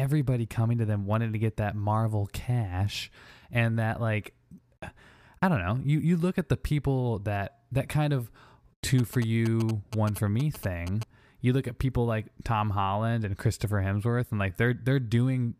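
GSM signalling bursts run from 8.99 to 11.03 s: a nearby 2G phone exchanging short groups of radio bursts with the network, which the audio circuitry rectifies into galloping ticks and brief 217 Hz buzzes, roughly 15 dB below the speech.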